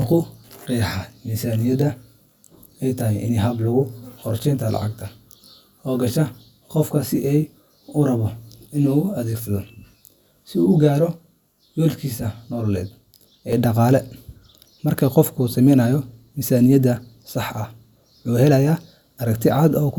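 From the start until 13.53 s, just before "ee dhaqaale", the speech has channel delay (comb filtering). One channel trails the other by roughly 20 ms, and when the two are summed to mono the shared content cancels at evenly spaced frequencies, with the first notch around 30 Hz. The result sounds rough or slightly doubled. It stops at 13.53 s.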